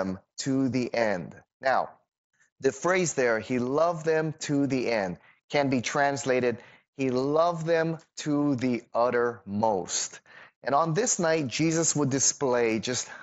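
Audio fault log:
0.85 s, concealed Bluetooth headset packet loss: a 15 ms smear where the sound is briefly patched over, which fits two lost packets.
3.11 s, concealed Bluetooth headset packet loss: a 7.5 ms slip between "the phrase" and "there he loved them", almost hidden.
7.80 s, concealed Bluetooth headset packet loss: another 7.5 ms patch between "be translated he loved" and "to the uttermost".
12.27–12.30 s, concealed Bluetooth headset packet loss: the longest gap, 22.5 ms, with a buzzy hold at full level and a slight warble as the real signal resumes. In each case packets from headset to phone went missing, and the receiver filled the gap by repeating the best-matching piece of the preceding audio, here carried over the mSBC wideband link.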